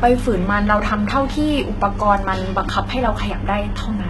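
Speech that sounds gritty and lispy in its s sounds throughout, with a bright but synthetic-sounding treble that stops dead around 11.8 kHz. This is likely HE-AAC compression at a very low rate, fitting roughly 16 kbps, where band replication fakes the upper spectrum from copied lower bands.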